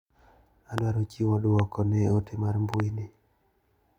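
A loud pop hits at 0.78 to 0.80 s. Another comes at 1.59 to 1.62 s. A third, a double pop, follows "ote mar" at 2.74 to 2.82 s. Each peaks around 15 dB above the speech. The speech carries on underneath. The likely cause is a sudden voltage step or pulse, from a plug, switch, static discharge or driver glitch. It is added to the signal and shaped by the circuits after it. The result is a sharp, brief thump.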